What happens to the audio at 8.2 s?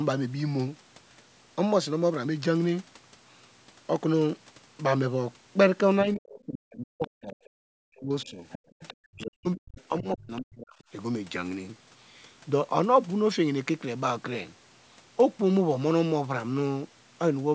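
That's speech suppressed in double talk, 6.04 to 8.45 s. The speech dips hard and breaks up, likely an echo canceller ducking it against far-end talk.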